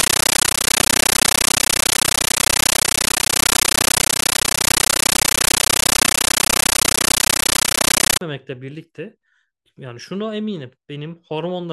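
An AC-3 stream, consistent with 640 kbps, is taken as ordinary samples and never decoded from 0.0 to 8.2 s: a compressed stream played as audio. Each frame becomes a 13.3 ms noise burst then silence, 31.25 times a second, so very loud chattering static replaces the speech.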